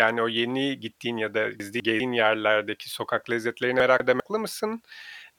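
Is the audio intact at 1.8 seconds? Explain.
No. From 1.6 to 2.0 s, chunks play out of order: one 200 ms chunk lands one chunk late, giving a jumbled stretch with hard joins.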